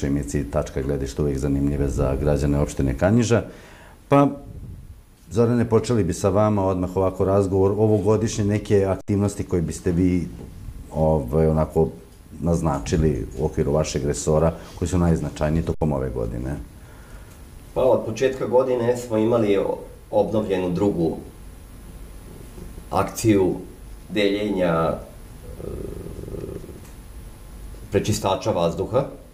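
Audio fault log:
9.01 s and 15.74 s, underrun with held sample: twice the output buffer runs dry and the converter freezes on its last value for about 70 ms until data resumes. The waveform shows a flat horizontal segment, offset from zero, so the sound cuts out almost silently, then a short step marks the return. Because roughly 70 ms of audio went missing rather than pausing, the restart lands as a click. On a spectrogram both instants show a blank vertical band with a thin broadband line at its end.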